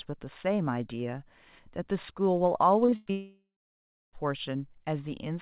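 From 2.86 to 3.11 s there is repeated packet loss, with a robotic sound. Four short gaps hit the stream, the longest 98 ms. Each is patched by extending the last sound. About 60% of this stretch is concealed, so it turns choppy.

At 3.11 s a long network dropout likely begins, running to about 4.15 s. The last sound is stretched as a fading buzz or hiss. Then about 650 ms of near-silence follows. Roughly a second of audio is lost before sound returns, still band-limited to 4 kHz by the G.711 call path.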